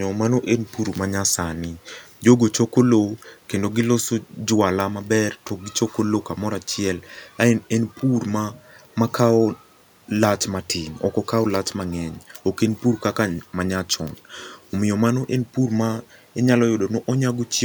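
Nothing goes wrong anywhere in this speech recording, and the only thing underneath it is the ordinary background noise of the room, sitting about 39 dB below the speech.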